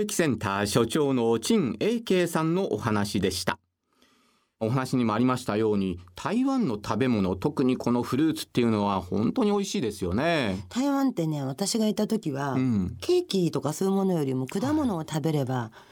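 No technical faults can be heard anywhere in the recorded speech.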